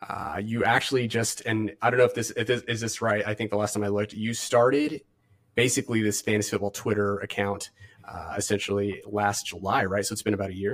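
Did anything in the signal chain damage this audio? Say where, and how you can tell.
Yes. A channel delay (comb filtering) fault sits at the driver or buffer stage. One channel runs around 10 ms behind the other, which points to a buffer-sized offset, and the two are then summed to mono. The speech sounds hollow and phasey for the whole clip. The shared content cancels at fixed, evenly spaced frequencies, with the first notch near 50 Hz and further notches about every 100 Hz above it.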